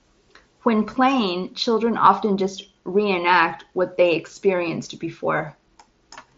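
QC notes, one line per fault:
No faults detected.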